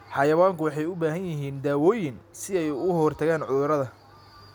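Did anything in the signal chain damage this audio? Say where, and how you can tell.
No, no signal-chain damage heard.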